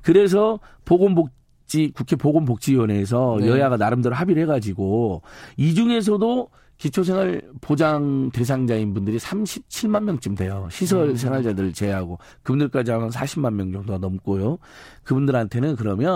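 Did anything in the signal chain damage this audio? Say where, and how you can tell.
Yes. From 6.60 to 12.02 s the speech takes on a rough, metallic edge from periodic clock jitter at the converter. Interference wobbles its sample clock at around 700 Hz, so a spectrogram shows sidebands that far above and below each harmonic, strongest at high frequencies and gone in pauses.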